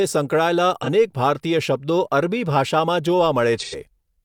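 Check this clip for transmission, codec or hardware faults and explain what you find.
The speech has AAC frame loss with concealment, twice. From 0.83 to 0.89 s, 42.7 ms drops out, fitting one lost frame. From 3.60 to 3.75 s, 85.3 ms drops out, fitting two. The decoder patches each gap from the last good spectrum. Each gap sounds like a short smeared patch.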